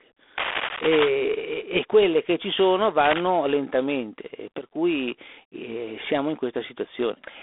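G.726 ADPCM runs through the whole speech clip, with damage that is plainly audible. The sound is confined to a telephone band of roughly 300 Hz to 3.5 kHz, with nothing above 3.8 kHz, and a harsh, rasping hiss rides on the speech and rises and falls with its level. That grain fits the 24 kbit/s mode, where each sample carries too few bits of difference from the adaptive prediction. Cable scratch noise appears from 0.37 to 1.09 s, ending just before "e quelle che ci": dense, uneven bursts of scratching and rustling, nearly as loud as the speech itself. This is likely a worn cable, connector or control being moved, so that its contact resistance flickers rapidly.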